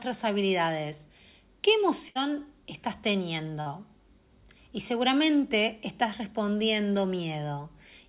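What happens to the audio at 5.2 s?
Nothing goes wrong at 5.2 s: the speech carries on intact, with the same narrowband call sound heard throughout, nothing above 4 kHz, which fits a G.711 telephone codec.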